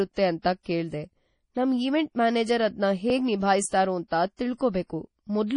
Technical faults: MP3 compression

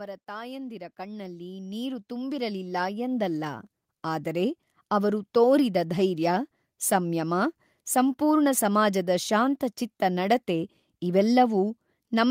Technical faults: automatic gain rising

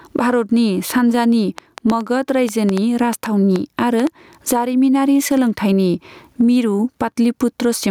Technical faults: gain pumping; train of clicks

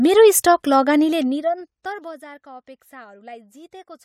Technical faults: zipper noise

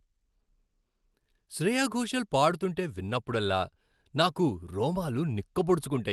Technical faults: none

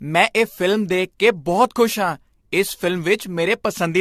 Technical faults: generation loss

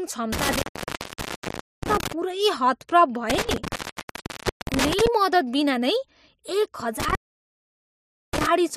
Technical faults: intermittent contact

